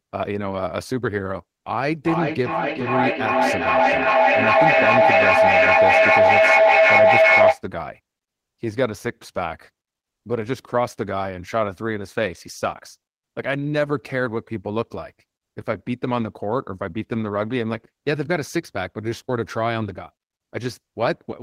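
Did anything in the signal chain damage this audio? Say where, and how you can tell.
Yes. Between 1.83 and 7.65 s there is a feedback howl, arising acoustically in the call path. A tone near 700 Hz swells to about 8 dB above the speech, pulsing roughly every 0.4 s. That pulse is the loop delay, as each pass returns louder.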